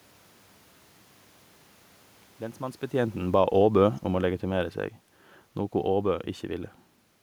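From 3.2 s to 4.84 s the automatic gain control judges the input too loud or its background noise too strong and winds its gain down gradually, by about 8 dB over that stretch, so this is automatic gain falling. The speech sinks steadily rather than stepping down, and the room noise beneath it drops by the same amount, which separates it from the level change near 2.5 s, where the talker moved and the background held steady.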